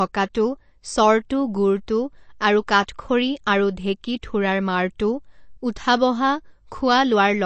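Throughout this speech recording there is plainly audible MP3 compression. Nothing is left above about 8.3 kHz, and the sound has a watery, swirling quality with smeared consonant edges. That points to a low bitrate of around 36 kbps, likely from starved encoding. A simple low-pass filter would dull the top end but would not add swirl.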